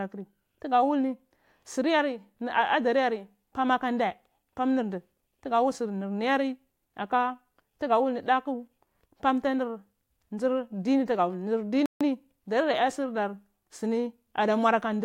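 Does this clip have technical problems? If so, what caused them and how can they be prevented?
Yes. A playback stall occurs from 11.86 to 12.01 s, where the speech drops to silence for 150 ms mid-flow and then carries on. The likely cause is that the player ran out of buffered data or its output thread was briefly blocked. A larger playback buffer, plus a high-priority audio thread that never waits on disk or network access, would prevent it.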